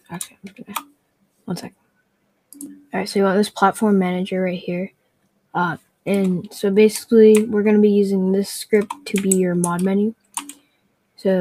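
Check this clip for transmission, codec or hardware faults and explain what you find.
Two related faults are present, both from a speech noise suppressor acting on non-speech sound.

A noise suppressor applied to music or sounds runs throughout. It treats steady tones and tails as noise, so the level pumps by around 15 dB.

Sound cut by the noise suppressor occurs at 0.28–0.67, 0.83–1.49, 1.69–2.55, 2.76–2.93, 4.89–5.54, 5.78–6.07, 10.13–10.36 and 10.53–11.21 s. Sustained parts sink by about 20 dB, about 15 dB at 2.76 s, while attacks survive.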